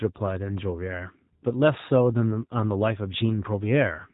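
A short speech recording carries G.729 codec damage from start to finish. Nothing above about 3.8 kHz survives, so it sounds narrow and muffled. The voice is rebuilt from a filter, pitch predictor and sparse pulses, fitting an 8 kbit/s stream. That leaves it plainly rough and synthetic.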